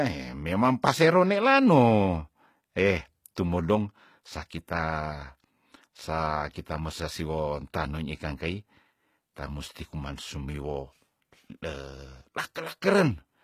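From start to end the speech carries plainly audible HE-AAC compression damage, likely at about 20 kbps. Treble is rebuilt from lower bands, so s sounds turn gritty and metallic.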